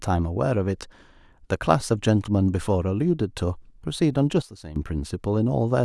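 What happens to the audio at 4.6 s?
At 4.6 s the speech sits inside a sudden gain jump running from 4.42 to 4.76 s, where the level drops by about 14 dB in a single step and then steps back up. The likely cause is a digital gain change applied from one sample to the next with no ramp. Unlike a dropout, the sound never vanishes, and unlike compressor pumping, the background noise falls and returns instantly in lockstep with the speech.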